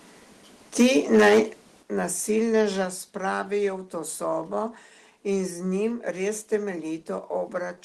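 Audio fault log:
0.8–1.4 s, microphone overload: loud peaks turn harsh and crackly, about 9 dB past full scale with roughly a tenth of samples flattened, likely from excessive input gain. Only the loudest syllables distort, unlike codec artefacts.
1.83 s and 2.85 s, microphone volume stepped down: level drops abruptly, by about 8 dB, then about 4 dB before "spravijo v to sobo", likely the software cutting input gain after clipping. Voice and background fall together instantly, unlike a compressor's gradual pumping.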